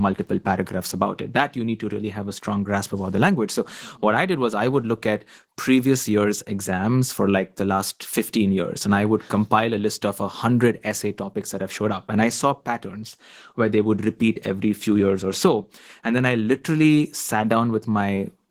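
Speech throughout, carrying plainly audible Opus voice compression for the whole clip. The speech sounds coarse and hoarse, which fits a hybrid-mode encode near 16 kbps, where SILK codes the excitation sparsely and a thin CELT layer handles the top band.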